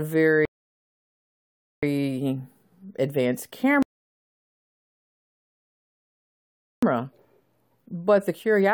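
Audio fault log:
0.45–1.83 s and 3.83–6.83 s, rebuffering stall: the player exhausted its downloaded audio and halted until more arrived. The speech drops to silence for about 1.4 s, then 3.0 s, and resumes exactly where it stopped, so nothing is lost but time is added.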